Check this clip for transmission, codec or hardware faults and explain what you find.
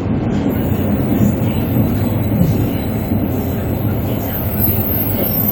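No transmission, codec or hardware fault is audible anywhere in the audio.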